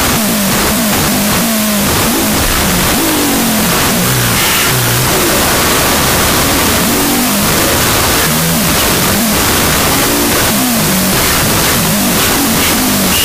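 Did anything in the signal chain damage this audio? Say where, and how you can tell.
Yes. The damage is at sample-format conversion and runs through the whole clip: a wrong sample width, with 16-bit integer data read as unsigned 8-bit. Each original sample becomes two, so everything plays at half speed, an octave low, buried in loud noise from misread low bytes.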